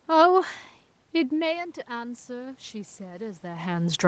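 A speech recording, heard through a call path with nothing above 8 kHz, shows automatic gain rising from 1.13 s through to the end of the clip. The level at the microphone drops by about 17 dB around the moment the talker moves back, near 1 s. The automatic gain control then reads the input as too quiet and slowly raises its gain, so the voice and the room noise swell up together over the following seconds.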